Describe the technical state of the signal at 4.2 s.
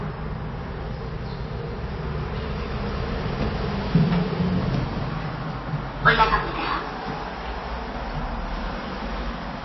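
At 4.2 s the audio carries MP3 compression damage, as it does from start to end. The sound is plainly degraded. Nothing is heard above 5.8 kHz, so the top end is cut off flat. Weak frequency components flicker in and out between frames, giving a watery, swirling texture, and attacks smear. The damage is likely from an encoder starved of bits, which fits a very low bitrate of around 24 kbps.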